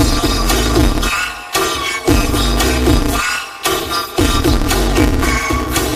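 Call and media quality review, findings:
Robotic buzz at about 188 Hz over the whole clip, no clear octave jump. Planar audio read as interleaved, likely in the capture or decode buffer handoff. Each 5.33 ms block, which fits a 256-sample block, plays left-then-right at double speed, and that block rate is the buzz.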